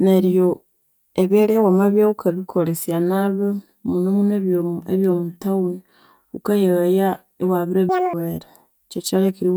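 From 7.89 s to 8.13 s, the speech jumps into fast, chipmunk-like playback. This is audio read two samples at a time, giving double speed. The reader grouped pairs of samples into single frames, as if the data held two channels or wider samples. So each stretch of sound plays in half the time, at 2.0 times speed. Pitch rises a full octave.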